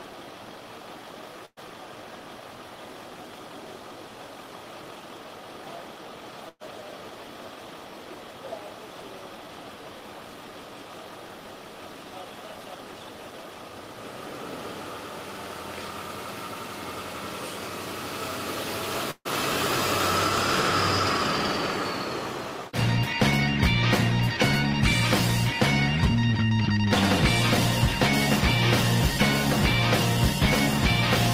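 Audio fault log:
1.45–1.59 s, 6.49–6.63 s, 19.11–19.27 s: burst of packet loss. At each point a short run of audio never arrived in time to be played, so the receiver covered the hole by extending the last sound it had and lowering it until it fell silent. The concealment lasts about 113, 120 and 143 ms, ending in roughly 40, 40 and 50 ms of silence. Playback then picks up further along, with about 120, 120 and 140 ms of the original sound missing.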